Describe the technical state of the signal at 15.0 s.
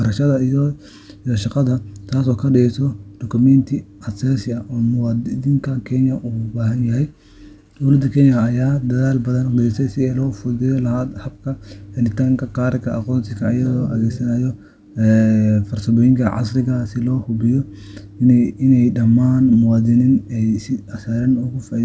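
At 15.0 s the speech is intact, with no dropout, glitch or distortion, only the band limit near 8 kHz of the call codec path.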